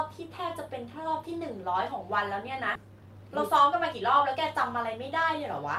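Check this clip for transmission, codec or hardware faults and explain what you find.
Two kinds of fault are present in this speech clip.

Skip ahead at 2.75 to 2.77 s. About a second of speech is missing. Playback jumps forward with no gap, joining both sides almost directly.

Jitter buffer speed-up at 2.85 to 3.07 s and 3.49 to 4.37 s. An overfull buffer trimmed short pitch periods repeatedly. Speech runs 14% then 6% faster, same pitch, sounding hurried.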